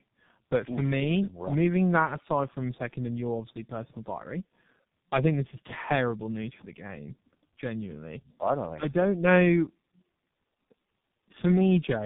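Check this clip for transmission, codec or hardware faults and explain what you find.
Tandem speech coding runs through the whole clip. The speech passed through two low-rate speech coders in a row, likely a G.729A-type stage and then a G.723.1-type stage with a plain G.711-style link between them, each re-coding the last one's damage. Nothing sounds above 3.7 kHz. Unlike a single low-bitrate codec, the roughness, muffling and warble are compounded.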